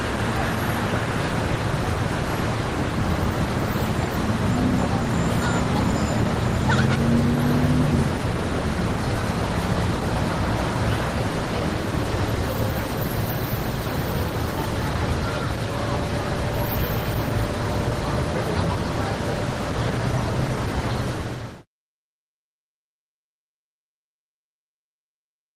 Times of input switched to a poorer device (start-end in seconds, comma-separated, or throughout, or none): none